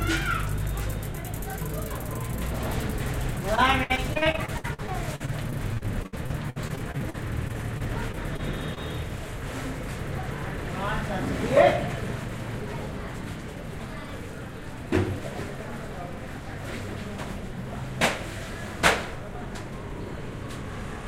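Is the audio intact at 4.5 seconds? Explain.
No. Repeated packet loss (robotic sound) runs from 3.55 to 8.78 s. Dozens of short dropouts, the longest about 61 ms, are each patched by extending the preceding sound, about 17% of that stretch, leaving the audio choppy with pieces missing.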